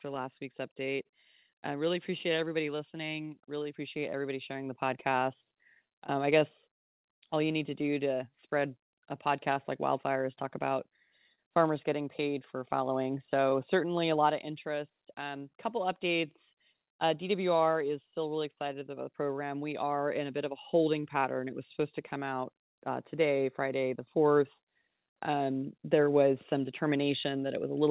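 There's clock drift between sender and receiver running through the whole clip. The sender's clock is about 2% slow, so the receiver keeps running short and has to compensate.

Those repeated timing corrections run from 0.07 to 27.31 s. The receiver stretches the speech to roughly 98% speed, adding something like half a second in total, and if you hear it at all, it's as slight hiccups and a slightly uneven pace.

Right at the start, 0.15 to 1.07 s, there are scattered short gaps. That's about three late or lost packets, each patched by carrying the last sound forward, around 40 ms filled in total. They come across as tiny ticks or smears.

At 11.35 to 11.40 s there's a short stall from a late packet. The buffer ran dry, and the receiver held the sound for 27 ms until the packet showed up, giving a brief stretched moment with a slight buzz or dip.

Another stall lands at 13.50 to 13.53 s. 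This one is 15 ms of held sound, nothing lost, just a quick smear. The call path itself is G.711 mu-law, so the speech has nothing above 4 kHz.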